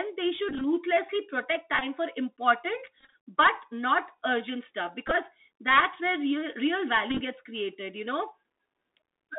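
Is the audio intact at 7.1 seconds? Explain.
No. From 7.10 to 7.21 s, just after "that's where real real" and before "gets created you know", the sound breaks into a stuttering buzz near 267 Hz, with the longest steady stretch about 30 ms. This is Bluetooth headset packet repetition. Voice packets were dropped across roughly 98 ms, about 71 ms of audio in all, and the chip kept replaying the last good packet every 3.75 ms, a pattern consistent with around nineteen lost packets. Under that, the whole moment has the thin, band-limited tone of the Bluetooth CVSD headset codec. Nothing passes outside about 250 Hz to 3.6 kHz, and there is a granular hiss with scratchy s sounds. This comes from CVSD's one-bit up-or-down steps at 64 kHz, whose adaptive step size can't keep up with loud high content.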